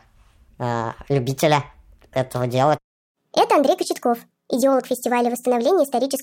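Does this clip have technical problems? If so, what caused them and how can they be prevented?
Yes. Throughout, the speech plays about 1.38 times too fast and roughly 5.6 semitones high, the signature of a wrong sample rate: audio recorded at 32 kHz played back at 44.1 kHz without resampling. Prevent it by resampling to the playback rate.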